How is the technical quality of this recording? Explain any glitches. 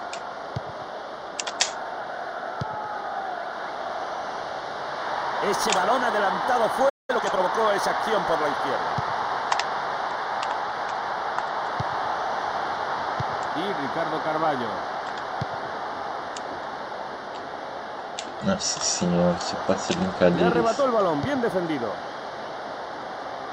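The recording has two linked glitches, a brief dropout and a hurried passage just after it.

From 6.89 to 7.10 s there is a playback stall. The audio falls silent for about 0.2 s, likely because the player ran short of data or its thread was blocked.

From 7.10 to 7.48 s comes time-compressed catch-up. The player trims small slices and cross-fades them to clear the backlog, so the audio runs at 1.5 times normal speed. Pitch stays normal, which distinguishes it from a resampling speed-up.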